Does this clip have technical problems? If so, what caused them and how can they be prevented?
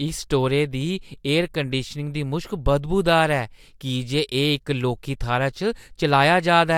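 No, nothing in this speech clip stood out as a technical problem on listening, so there is no cause to trace or prevent.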